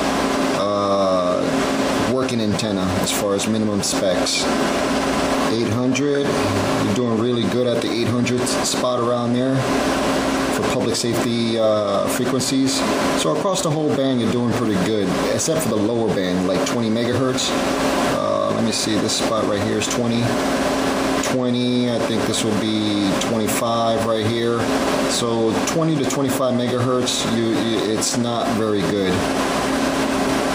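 Compressed frames are skipped at 15.41 s and 30.25 s: each jump drops around 50 ms, pointing to two missing 23.2 ms frames.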